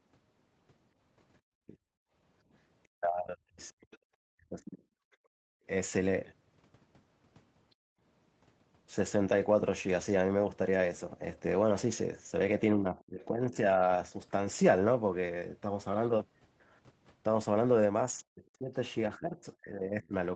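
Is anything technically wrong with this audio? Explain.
Yes, the speech is repeatedly ducked, the room sound drops out briefly, and a faint second voice leaks in.

Speech suppressed in double talk appears at 1.52–5.62 s (about 1.5 s in total, dipping by around 40 dB), 12.77–13.81 s (about 0.7 s, around 30 dB) and from 18.29 s to the end (around 30 dB). This is likely an echo canceller that couldn't tell the talker from loudspeaker echo while both sides spoke, so it attenuated both. The voice dips, loses its high end or cuts out in pieces. On a waveform, the envelope shows sudden notches. On a spectrogram, the harmonics fade or vanish in vertical strips.

Background gated by the echo canceller occurs at 2.03–2.12 s (about 31 dB), 5.08–5.28 s (about 33 dB) and 7.75–8.01 s (about 40 dB). The canceller clamped the microphone hard while the loudspeaker played, so the room tone briefly drops to near silence, then returns. 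A spectrogram shows short blank gaps across all frequencies in the noise floor.

Other side's voice leaking through runs from 3.91 to 5.16 s, roughly 30 dB below the talker. It is likely loudspeaker output that the echo canceller didn't fully remove from the microphone. It is heard as a faint second voice. On a spectrogram, weak harmonic traces sit beneath the main speech. All content stops at 8 kHz, consistent with the call's Opus band limit.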